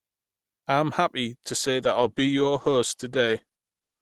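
An adaptive stream drop to a lower bitrate begins at 1.35 s, right after "I'm happy", and lasts to the end of the clip at 4.02 s. With no gap, the audio switches abruptly to a thinner version: nothing remains above 12.3 kHz, the top end turns dull, and codec artefacts rise. This points to the player falling back from roughly 64 to 16 kbit/s Opus when the connection slowed.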